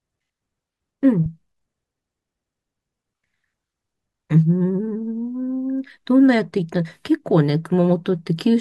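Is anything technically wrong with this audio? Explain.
No, nothing technically wrong stood out on listening to this speech recording.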